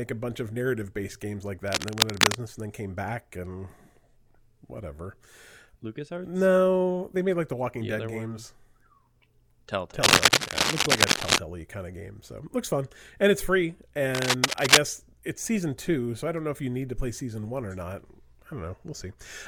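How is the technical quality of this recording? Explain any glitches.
The speech is marred by three bursts of cable scratch noise, from 1.68 to 2.38 s, 10.03 to 11.40 s and 14.15 to 14.79 s. Each is a dense, uneven rustling slightly louder than the speech, likely from a worn cable or connector whose contact resistance fluctuated as it moved.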